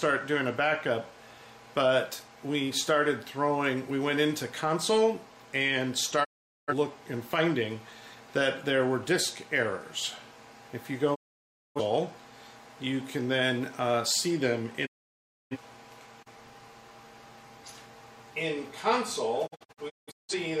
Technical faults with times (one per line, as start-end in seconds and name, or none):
6.23-6.73 digital broadcast dropout
11.14-11.80 digital broadcast dropout
14.85-15.57 digital broadcast dropout
19.46-20.39 digital broadcast dropout